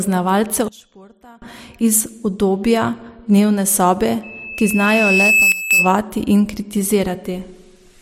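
From 0.68 to 1.42 s the speech drops abruptly by about 24 dB and returns just as suddenly, a sudden gain jump likely caused by a gain change applied without a ramp. On the waveform the envelope steps down and back up; on a spectrogram every frequency darkens together.

From 4.23 to 5.96 s a loudspeaker feedback squeal rises: a single 2.6 kHz tone swells over roughly 1.5 s to around 5 dB above the speech. The loop's gain exceeds one at that frequency, so a spectrogram shows one bright, thickening horizontal line.

Inside the squeal, from 5.52 to 5.71 s, the level falls by about 13 dB in another step-like gain jump. The squeal and the speech drop together, which shows as a rectangular notch in the waveform envelope.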